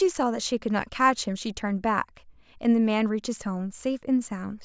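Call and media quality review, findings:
No audible faults found in this speech recording.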